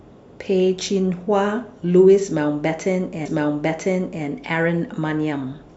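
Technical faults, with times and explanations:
3.25–4.25 s, stream segment repeated: one second of the speech plays a second time because the same segment was fetched or queued twice, adding 1 s. A small blip sits at the jump back. On a spectrogram that second's pattern appears twice in a row, with a thin vertical line at the splice.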